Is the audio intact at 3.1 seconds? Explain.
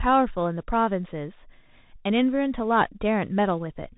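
No. At 3.1 seconds the speech sounds muffled and boxy, with a grainy hiss underneath, scratchy s sounds and roughness on loud high-pitched moments. This is Bluetooth CVSD headset codec damage, present for the whole clip. CVSD sends a single up-or-down bit per sample, which fits a 64 kbps stream, and adapts its step size as it goes. Nothing above 4 kHz survives, and fast loud changes outrun the step and distort.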